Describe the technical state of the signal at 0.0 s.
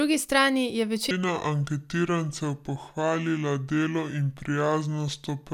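At 0.0 s the speech signal is intact, with no audible fault at that moment.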